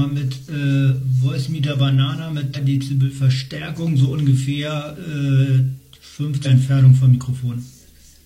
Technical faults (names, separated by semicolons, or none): damaged data in a compressed stream